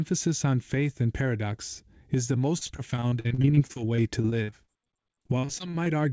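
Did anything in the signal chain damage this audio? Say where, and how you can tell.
Yes. Repeated packet loss (robotic sound) damages the network stage from 2.58 to 5.89 s. Dozens of short holes, the longest 47 ms, are patched by stretching the preceding sound. About 23% of that stretch is filled-in audio, giving a choppy texture with pieces missing through the band-limited call audio, which stops at 8 kHz.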